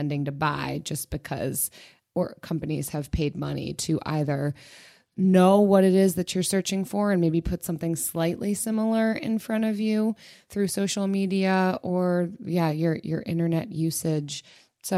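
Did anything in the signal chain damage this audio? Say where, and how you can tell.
Yes. A Bluetooth SBC bit pool drop at the codec stage, 2.75–5.34 s and 14.02 s onward, dulls the treble and adds gritty noise, which fits a bit pool cut from 28 to 14.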